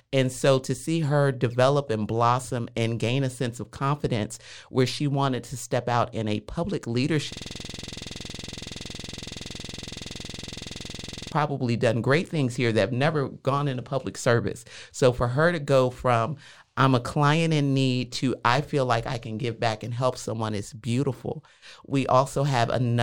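A system hang loop runs from 7.33 to 11.32 s, after "out in a public" and before "done great things here". The system froze while playback kept cycling one 46 ms stretch, which fits a 2048-sample buffer, producing a rough, rattling 21.5 Hz buzz.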